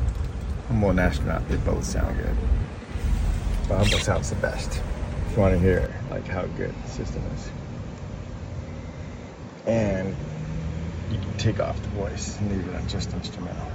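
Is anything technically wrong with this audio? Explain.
Yes, there are two problems, both near the middle of the clip.

From 5.86 s to the end, the sound changes character with no gap at the change. It's suddenly duller and boxier, the top end is narrower, the level drops by roughly 5 dB, and a new noise floor appears, sitting around 35 dB below the signal. That combination is most likely an input switched to a poorer device, with the recording jumping to a narrower-band mic that brings its own tone, gain and hiss.

At 6.09 s, just after that change, there's a single sharp click. It's likely dropped samples: well under a millisecond of audio goes missing, so the waveform jumps abruptly from one value to a later one. The gap is far too short to remove any audible sound, so what you hear is just that one tick, which shows up as a thin vertical line on a spectrogram.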